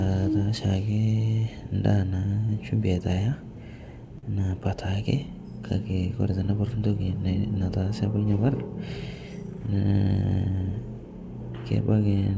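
At 4.18 s a sound is held too long, for about 49 ms until 4.25 s, with a slight buzz or dip before the audio resumes. This is a short stall from a late packet: the jitter buffer emptied while a packet was overdue, so the receiver stretched the last audio and then carried on, losing nothing but arriving about 49 ms later. The call path carries no content above 8 kHz, which fits a wideband codec such as G.722.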